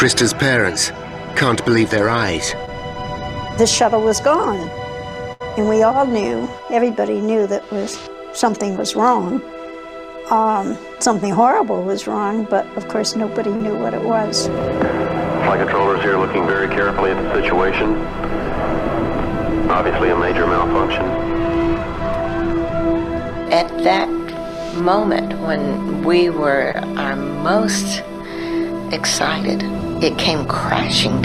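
At 2.65 s there's a short concealed packet loss: about 20 ms of audio never arrived in time, so the receiver bridged a 14 ms hole by carrying the last sound forward and then blending back into the real signal. You hear it as a brief smear or wobble.

At 5.33 s, running to 5.42 s, there's a burst of packet loss. Here the receiver had to cover 73 ms, extending the last sound while turning it down, so it comes across as a held buzz or a fading hiss. When playback picks up again, about 80 ms of the original audio is simply gone.

The same short concealed packet loss returns twice more, at 13.56 s and 26.72 s. At 13.56 s, 40 ms went missing and 40 ms was filled. At 26.72 s, 20 ms went missing and 25 ms was filled. Both sound like that quick smear again.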